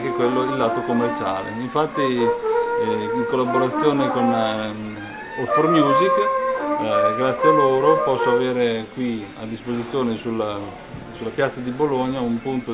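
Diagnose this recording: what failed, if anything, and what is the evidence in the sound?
Nothing in the recording points to a failure at any stage of the chain. No event in the sound marks a point where wiring, conversion, buffering, processing, transmission, storage or playback went wrong.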